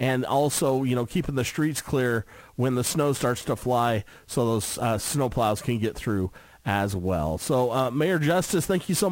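There's sample clock jitter running through the whole clip. The converter's timing wobbles, on the order of ten microseconds, so each sample lands a touch early or late, and the error tracks how steeply the waveform is moving at that instant. You hear it as a grainy hiss riding on the louder, brighter parts, sitting roughly 20 dB under the sound itself, and it drops away completely in silence.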